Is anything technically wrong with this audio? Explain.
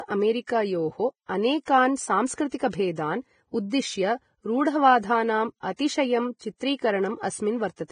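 Yes, there's heavy compression damage across the whole recording.

Throughout, it sounds like likely Vorbis compression at a low bitrate, around 20 kbps: nothing above 9.7 kHz, and coarsely quantised treble turns speech hissy and grainy with smeared consonants.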